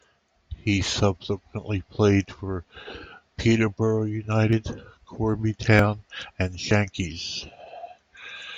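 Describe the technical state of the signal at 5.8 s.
At 5.79 s the speech jumps abruptly forward, with no gap of silence. Roughly 40 ms of sound is simply missing, and the audio on either side is butted together, so the flow of the speech lurches at that instant. This is likely a dropped buffer (overrun): the recording software failed to collect a block of samples before the hardware overwrote it, and that block was lost.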